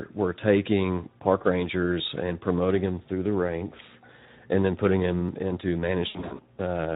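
It's a speech clip, and the whole thing carries plainly audible Speex codec damage: hoarse and noisy, the kind of texture that fits a bitrate around 11 kbps, where the CELP excitation is starved of bits and the upper band is mostly a shaped noise fill. There are two quick skips, at 2.31 s and 5.29 s, each dropping something like 20 ms and butting the two sides together with no gap. They sit three seconds apart, so it's likely audio missing between chunks as the recorder closes one block and opens the next. Then from 6.06 to 6.41 s you get VoIP packet loss concealed by the speech codec. About 220 ms goes missing, scattered across 320 ms, with the longest run about 80 ms. The decoder fills those holes by extrapolating from its last pitch with fading gain, and the speech stays weak and smeared for a while after the packets return.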